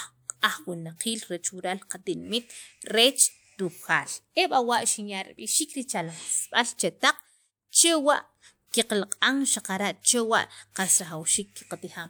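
No technical faults can be heard anywhere in this speech recording. There is no point in the audio that needs a time marked or a cause explained.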